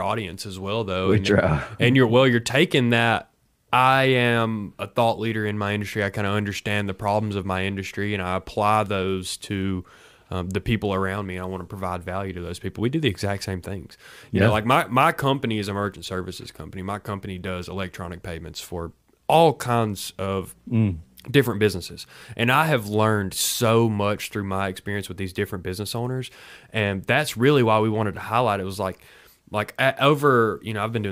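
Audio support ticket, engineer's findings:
No faults found on listening to this speech clip. Nothing audible points to a failing component or stage in the chain.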